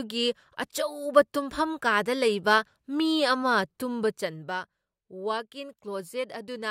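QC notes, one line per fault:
3.92–4.62 s, zipper noise: a fine ticking, zipping texture rides on the speech while the level drops by roughly 10 dB over about 0.7 s. The gain moves in discrete jumps rather than a continuous slide, at roughly forty steps a second, and each jump puts a small click into the waveform. Together these clicks form the buzzy rasp.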